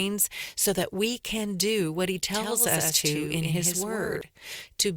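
From 2.33 to 4.21 s the speech picks up a doubled audio track: a copy about a tenth of a second late, a few dB quieter, dry, likely from a second, slower capture path.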